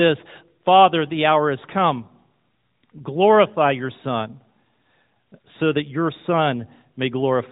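No technical faults detected.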